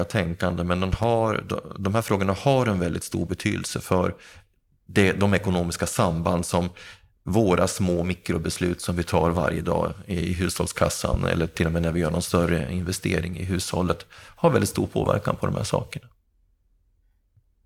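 At 0.93 s a loud pop cuts in, a pair of sharp thumps ending by 1.06 s. At 11.14 to 11.16 s a single pop follows. Each peaks roughly 15 dB above the speech, which carries on underneath. The likely cause is a sudden voltage step or pulse entering the signal, from a plug, a switch, static or a driver glitch. The circuits after it shape that pulse into a brief, hard thump.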